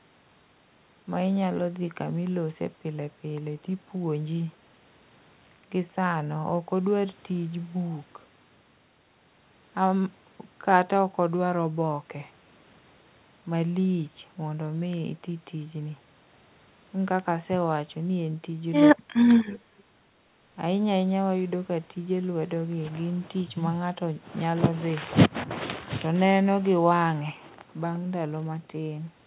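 From 18.93 to 19.28 s the speech sinks sharply, by about 30 dB at its deepest, for about 0.4 s in total. This is speech suppressed in double talk: with both sides talking, the echo canceller likely mistook the talker for loudspeaker echo and turned both down.

At 19.49 to 19.59 s a faint, brief ghost of the voice slips through, about 30 dB under the speech and trailing it by 232 ms. This echo leak is likely the far end's echo canceller missing part of its loudspeaker sound, sending it back. Throughout, the G.711 A-law call path keeps everything below 4 kHz.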